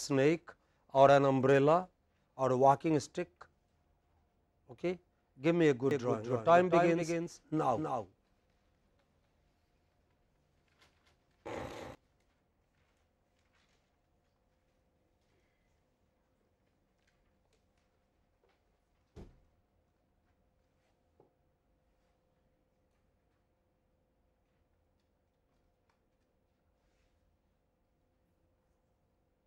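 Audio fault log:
5.91–11.95 s, doubled audio track: A second, slower capture path has likely been mixed in alongside the main feed, so the audio plays twice, with a full-band copy trailing the original by about 300 ms and sitting roughly 5 dB lower. The copy has no decay or room colour, so it sounds like a dry, stuttering repeat rather than an echo. It cuts in abruptly at 5.91 s and drops out just as suddenly at 11.95 s.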